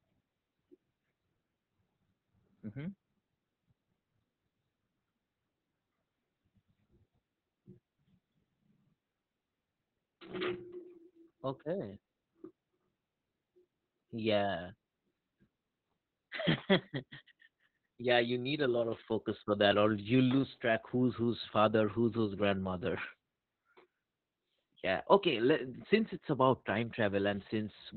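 The speech in this clip has gone through heavy Opus voice compression from start to finish. The encoder appears to have been starved for bits, with a muffled, hoarse quality that fits a rate of around 8 kbps. At that rate Opus falls back to its SILK linear-prediction coder in narrowband mode and discards everything above about 4.3 kHz. It also codes the excitation signal only coarsely, which leaves the speech dull, rough and faintly robotic across the whole recording.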